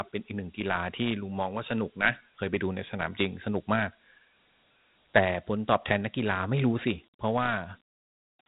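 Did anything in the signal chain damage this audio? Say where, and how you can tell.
Yes, at the codec stage: the speech carries Dialogic VOX ADPCM damage from start to end. Every sound is followed by a gritty, granular hiss, and nothing is present above about 3.9 kHz, which fits a 32 kbps, 8,000-sample-per-second VOX stream. The 4-bit ADPCM coder predicts each sample and stores only a coarse correction, so its step error rides along as noise that tracks the signal. On a spectrogram there is a hard ceiling near 3.9 kHz, with a speckled noise haze filling the band under the speech.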